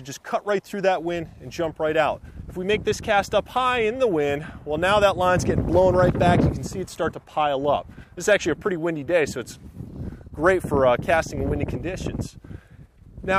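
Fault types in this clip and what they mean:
No technical faults can be heard anywhere in this audio: the signal stays steady and continuous, with no dropouts, distortion or level disturbances.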